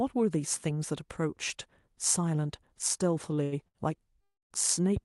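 Around 3.35, 3.43 and 3.68 s, the speech briefly hangs on a held sound for about 20, 84 and 69 ms, with a faint buzz or dip before carrying on intact. These are short stalls from a late packet: the jitter buffer ran dry, so the receiver stretched the last sound until the packet arrived.

From 4.21 to 4.52 s, the audio freezes for roughly 300 ms. A fading buzz or hiss gives way to about 210 ms of silence before the speech resumes where it left off. This call audio freeze likely comes from packets held up in transit, emptying the jitter buffer and inserting a gap.

Between 4.96 and 4.99 s, a single sharp pop jumps out, about 10 dB above the speech, which continues beneath it. This loud pop is likely a sudden voltage step or pulse, from a plug, switch, static or driver glitch, shaped by the circuitry that follows.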